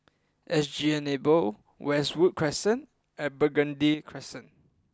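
A speech recording whose level drops abruptly by about 6 dB at 3.94 s and stays down until the end at 4.93 s, a one channel drops out fault. The likely cause is one stereo channel going silent, so after the mono sum only half of the shared signal remains. On a waveform the envelope steps down sharply at 3.94 s; a spectrogram shows the whole band dimming at once, with no change in spectral shape.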